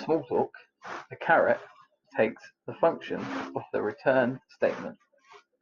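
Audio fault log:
No faults can be heard anywhere in the speech. Nothing here calls for a log entry.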